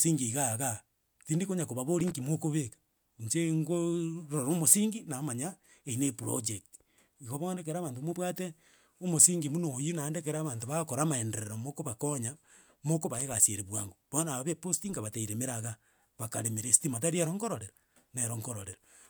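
At about 2.00 s there's a short burst of loose connector crackle, roughly 0.16 s of irregular scratchy crackle. It's a worn or dirty contact shifting and briefly making and breaking, so the signal gets chopped into fragments. It comes back at 13.14 s for a quicker 0.08 s burst, right before "egasi ere bwango". Both bursts have that rough, uneven texture of a loose contact being nudged.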